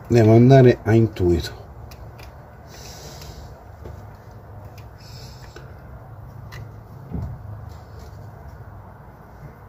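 No technical faults can be heard in the audio at any point.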